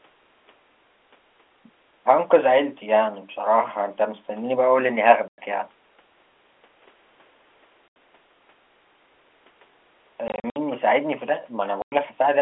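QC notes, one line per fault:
5.28–5.38 s, packet loss filled with silence: the speech drops out for 100 ms. The gap fits five lost 20 ms packets replaced by silence.
7.88–7.96 s, packet loss filled with silence: an 80 ms hole, about four packets long. The cut is abrupt at both ends.
10.28–10.56 s, packet loss filled with silence: scattered gaps totalling 160 ms over 280 ms. The longest run is 60 ms. The speech sounds chopped.
11.82–11.92 s, packet loss filled with silence: another 100 ms silent hole with hard edges.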